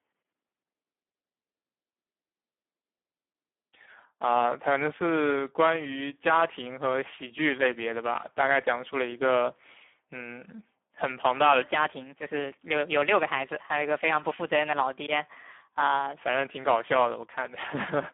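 Speex codec damage runs throughout: starved excitation coding leaves the speech hoarse and noisy, with a telephone band of 200 Hz to 3.4 kHz, nothing above 3.7 kHz, and a sound that fits about 8 kbps.

A section at the wrong speed runs from 11.62 to 16.18 s, playing 1.18 times too fast, likely from a clock mismatch, so the speech sounds hurried and about three semitones higher.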